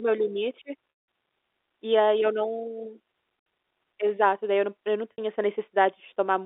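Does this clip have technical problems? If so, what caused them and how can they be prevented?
Yes. Packet loss with pitch repetition: packets went missing, and the receiver bridged each gap by repeating the last pitch period. After "meu limite", the 180 ms gap at 0.9 to 1.08 s fades toward silence. The 60 ms gaps at 3.4 to 3.46 s, after "e aí eu não", and at 5.13 to 5.18 s, after "eu não eu não", sound like a briefly held, buzzy tone. A larger jitter buffer, forward error correction or a less congested network path would prevent these losses.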